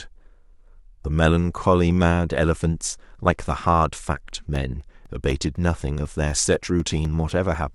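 From 4.06 s to 7.55 s the speech has periodic USB or driver dropouts: every 0.25 s a couple of milliseconds go silent, heard as evenly spaced ticks. Their clockwork regularity, sounding only under signal, separates them from random crackle or clipping.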